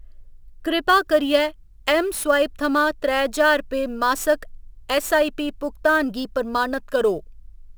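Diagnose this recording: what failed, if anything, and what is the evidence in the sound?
The converter stage failed, with sample clock jitter. From 0.88 s to the end, a hiss and roughness ride on the speech. They grow on loud and bright sounds and disappear in the pauses. The clock wanders by several microseconds, so samples land early or late at random. Fast-moving parts of the waveform suffer most. The resulting error sits only about 25 dB below the signal.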